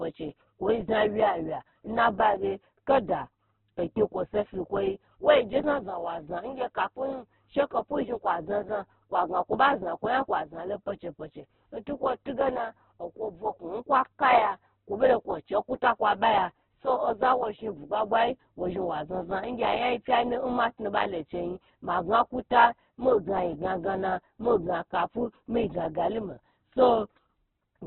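Throughout the speech, nothing survives above about 4.3 kHz, and the remaining band sounds rough, grainy and noisy rather than swirly. This is likely heavy Opus compression in its music mode, starved of bits and filling bands with noise, which fits a rate near 8 kbps.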